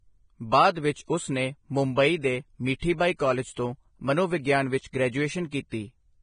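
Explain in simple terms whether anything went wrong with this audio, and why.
Vorbis compression, heavy, runs through the whole clip, from start to finish. The speech sounds dull and grainy: there is nothing above 9.7 kHz, so the crisp top end is missing, and what treble remains comes across as a rough hiss. The likely cause is saving the file at a very low quality setting. The encoder cut off the highest frequencies and stored the remaining treble so crudely that fine detail turned into noise.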